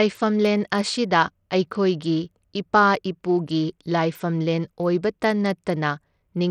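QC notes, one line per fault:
throughout, Bluetooth SBC compression: the speech's treble flickers and drops out amid gritty noise, likely SBC starving its top sub-bands, fitting a bitrate near 80 kbps.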